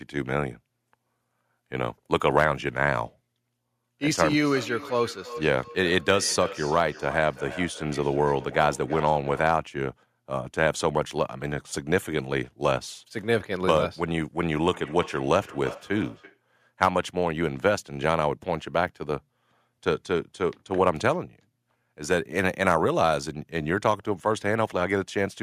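From 4.33 to 9.59 s the speech picks up a feedback echo between two devices. It returns at 14.66 s and lasts until 16.42 s. Two devices in the same room share the call. One plays out what the other captured, and that microphone hears it again. Neither echo canceller removes the other device's playback. Each sound comes back roughly every third of a second, at about 15 to 16 dB below the speech.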